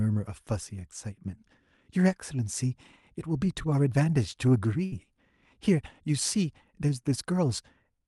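A speech clip with a burst of packet loss at 4.85 to 4.94 s: the receiver stretched the last sound for about 62 ms while fading it, and roughly 60 ms of audio just vanishes.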